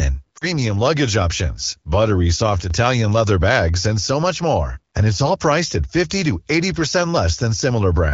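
Lost AMR speech frames, 0.37 to 0.46 s, just before "luggage options buttery": about 40 ms of speech, which fits two frames, failed to decode after radio errors. The decoder stretched the last good pitch and vocal tract settings at falling gain, so the sound drops to near silence before the voice returns weak or rough for a moment.

One channel drops out, 2.60 to 2.71 s, between "luggage options buttery" and "leather bags and so": the speech abruptly falls by about 6 dB for roughly a tenth of a second, then snaps back. The likely cause is one stereo channel vanishing, halving the mono sum.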